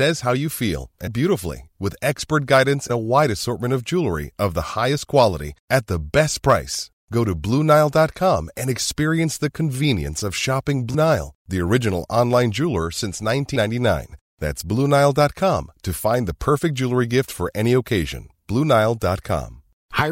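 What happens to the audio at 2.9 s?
At 2.89 s the speech jumps ahead with a brief smeared blip. Compressed frames were skipped: roughly four 26.1 ms frames dropped, losing about a tenth of a second.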